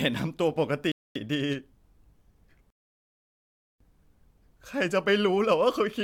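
At 0.92 s the speech just stops dead mid-flow and sits in silence for about 239 ms before carrying on from where it left off at 1.16 s. That's a playback stall, likely the player briefly running dry or its thread getting blocked.

Then at 2.70 s there's a longer gap: a rebuffering stall, where the player ran out of downloaded audio and waited for more. The sound drops to silence until 3.81 s, then resumes exactly where it stopped. Nothing's skipped, but about 1.1 s of dead air gets added.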